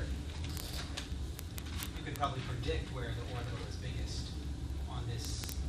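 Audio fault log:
0.11 to 5.68 s, word clock ticks: a fast rattle of sharp ticks of uneven strength, roughly every 30 ms, around two hundred in all. The receiver's unlocked clock drifts roughly 700 ppm from the sender's, so each slip drops or repeats a sample.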